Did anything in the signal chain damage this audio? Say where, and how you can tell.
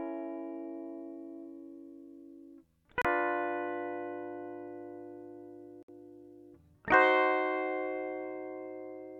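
Yes. The music drops to silence twice, at 3.02 to 3.05 s for 30 ms and at 5.83 to 5.89 s for 57 ms, then resumes. This is likely a Bluetooth stall at the wireless link: delayed packets emptied the receiver's buffer, halting playback until retransmissions arrived.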